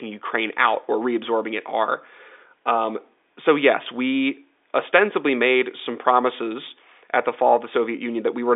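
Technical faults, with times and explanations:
Nothing stood out on listening to this speech, which comes through the narrow band of an ordinary telephone line as expected.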